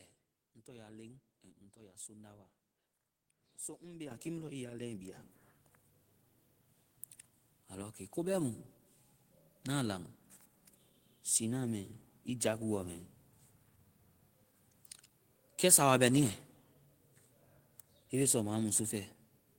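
At 4.11 s and again at 5.13 s, the microphone volume steps up, by about 9 dB then about 7 dB, so the voice and room noise jump louder together.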